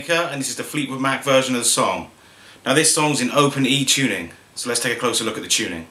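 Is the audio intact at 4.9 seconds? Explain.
Yes, the audio is intact at 4.9 seconds, with no fault audible at that point.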